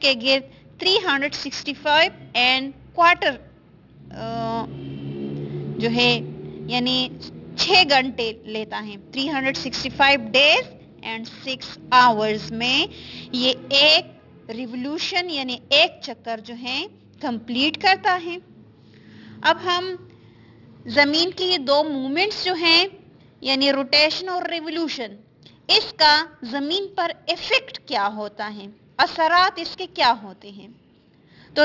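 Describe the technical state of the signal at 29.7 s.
At 29.7 s the signal shows aliasing, which runs through the whole clip rather than starting or stopping there. The sound was downsampled without an adequate anti-aliasing filter, so content above the 6 kHz folding point mirrors back below it as spurious, inharmonic components, consistent with a reduction to about a 12 kHz rate. These folded products sit roughly 15 dB under the wanted signal, giving high-frequency detail a gritty, metallic edge and a spectrum that stays dense right up to 6 kHz.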